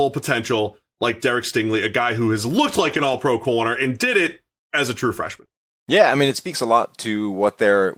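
From 2.81 to 3.19 s, after "guy who has looked" and before "pro corner and did", lost packets were rebuilt from error correction. The decoder played the low-bitrate copies carried in later packets, so there is no gap, but about 0.2 s of rebuilt sound comes out rough and noisy. The same happens from 5.25 to 5.43 s, after "it as a true", with about 0.1 s rebuilt. At 5.45 to 5.49 s, a short concealed packet loss follows. A 20 ms stretch never arrived, and the receiver extended the preceding sound to fill it, leaving a brief smear before the real audio resumes.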